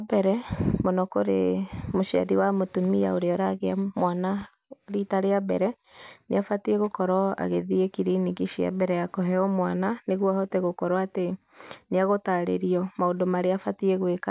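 No technical faults can be heard in this recording.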